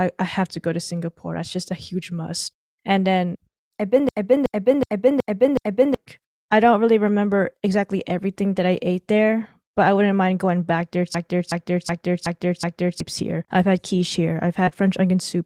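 At 4.09 s and again at 11.15 s, a system hang loop takes over the speech. Each time the same 0.37 s slice repeats five times, about 2.7 times per second, until 5.94 s and 13.00 s. That fits a frozen system with the hardware replaying a 16384-sample buffer. About two seconds of speech is lost each time.

From 14.65 s to 14.73 s, two short concealed packet losses follow each other. Two 20 ms pieces of audio arrived too late. The receiver filled them by extending the preceding sound, which leaves a brief smear or wobble.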